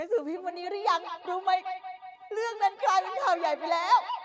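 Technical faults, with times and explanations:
0.36–4.25 s, feedback echo between two devices: from 0.36 s to the end, the speech returns at a steady interval of roughly a fifth of a second, with the strongest repeat about 11 dB below the direct sound. Each return is thinner and more ringing than the last. A second device in the room plays this call back into the microphone, and the local echo canceller cannot remove sound it did not play itself. The repeats share the clip's 8 kHz upper limit.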